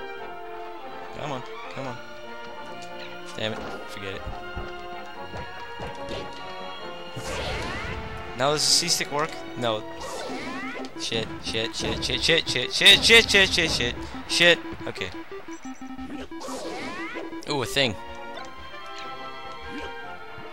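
Hard clipping appears from 14.41 to 14.51 s, a burst of roughly a tenth of a second. For that stretch the audio runs about 1 dB past the ceiling of some stage in the chain, so the tops of its peaks are sliced flat instead of following their natural curve. Those squared-off peaks generate high harmonics that were never in the original, and with an overload this slight the result is a brief crackle riding on the loudest moments rather than a sustained fuzz.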